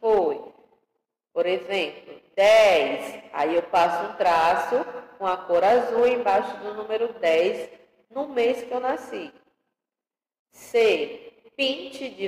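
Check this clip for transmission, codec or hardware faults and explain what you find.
One codec fault shows up, near the end. At 11.07 s, compressed frames are skipped: a single coded frame never reaches the output, either because it is missing from the stream or because the decoder rejected it as corrupt. The audio therefore jumps ahead by about 20 ms. It comes across as a brief break where the sound lurches forward slightly.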